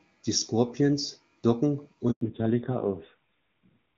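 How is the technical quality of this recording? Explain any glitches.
The recording has two linked glitches a little over two seconds in: a brief dropout followed by a lasting drop in bandwidth. Before that, the AMR-WB HD Voice sound is clear, with faint or no codec damage, which fits its top 23.85 kbit/s mode.

Handover gap, 2.11 to 2.21 s: the call switched networks and no speech frames arrived for about 100 ms. The sound dies away quickly and falls silent until the new link takes over, so whatever was said in that window is lost.

Fallback to narrowband, from 2.21 s to the end: the call left the wideband codec for an older narrowband one, which fits AMR-NB at 5.9 kbit/s. Nothing above 4 kHz survives, so the speech turns muffled, duller and rougher.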